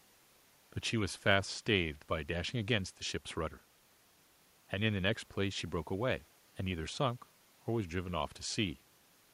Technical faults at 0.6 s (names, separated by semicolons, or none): none